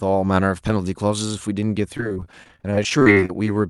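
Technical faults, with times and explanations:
1.97–3.47 s, repeated packet loss (robotic sound): about two dozen short holes, none longer than about 33 ms, each patched by stretching the previous sound. Roughly a fifth of that stretch is filled in, so the speech turns choppy with pieces missing, over a call codec that tops out around 12 kHz.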